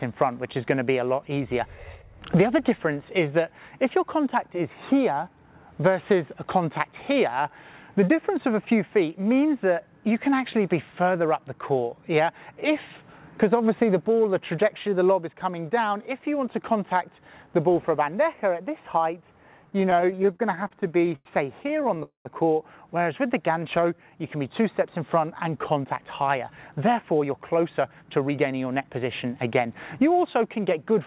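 Audio carried over a narrowband call link, with nothing above 4 kHz, as the G.711 mu-law path at 64 kbps leads you to expect, develops a run of jitter-buffer faults in its last third. From 19.66 to 21.27 s there are repeated stalls (stutter): 27 brief hold-ups, the longest 95 ms, where the receiver stretches the last sound while it waits for late packets. Together they fill roughly a quarter of that span. Nothing is lost, but the audio drags and judders. A second, lighter burst follows from 21.63 to 22.01 s, with seven stalls of no more than 14 ms each. At 22.03 s the sound halts for about 0.24 s. The held sound fades and then gives way to about 130 ms of silence before playback resumes where it left off. This is a call audio freeze, most likely packets held up in transit that emptied the jitter buffer, and it leaves the stream running about 220 ms later than before. From 22.98 to 24.11 s a jitter buffer slow-down follows, as the receiver rebuilds its reserve by repeating single pitch periods. 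It adds 115 ms, so the passage runs at about 91% speed with unchanged pitch, and sounds are drawn out. From 25.84 to 30.39 s the reverse happens: a jitter buffer speed-up trims short pitch-period slices to shed excess delay, about 0.3 s in all. Playback runs at about 107% speed, again at the same pitch, giving a hurried feel.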